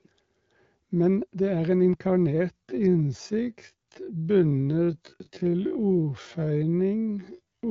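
From 2.51 s to the end of the clip, the speech abruptly slows to roughly half pace while its pitch stays put, and it drags, with syllables drawn out. This is a time-stretched section, likely from software lengthening the audio to about 0.55 times its original speed by repeating short slices to fill the extra time. Throughout, the sound is band-limited to about 7 kHz by the AMR wideband (HD Voice) codec.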